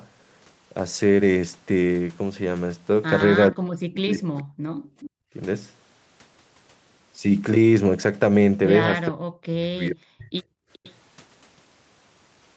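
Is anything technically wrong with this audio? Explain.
Yes, there are three kinds of fault, all typical of a hands-free call with imperfect echo control.

Speech suppressed in double talk: between 3.5 and 4.5 s, and again between 9.09 and 10.41 s, the speech sinks sharply, by something like 40 dB at its deepest, over roughly 0.7 s in the first stretch and about a second in the second. This is likely the echo canceller, faced with both sides talking at once, failing to tell the near talker from loudspeaker echo and pulling everything down together.

Echo leak: a delayed, ghostly copy of the speech surfaces three times, each trailing the original by 427 ms. At 4.38 to 4.43 s it is a faint scrap, roughly 30 dB under the speech. From 4.76 to 5.1 s it is much more audible, only about 15 dB down. At 10.73 to 10.93 s it is faint again. The consistent 427 ms lag points to the far end's loudspeaker playback being picked up by its microphone and likely only partly cancelled before being sent back.

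Background gated by the echo canceller: from 5.1 to 5.34 s, right after the louder echo, the room sound drops out for about 0.2 s, falling by about 40 dB before recovering. The canceller clamps the microphone hard while it believes the loudspeaker is active, taking the ambient noise with it, then releases.

The audio carries nothing above 8 kHz, consistent with a wideband Opus call path, which fits a bitrate around 32 kbps.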